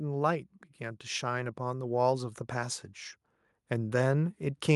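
From 1.19 s to 2.87 s, the automatic gain rising is audible. The gain control judged the input too quiet. It raised its level slowly, by about 4 dB. Voice and background swell together across those 1.7 seconds.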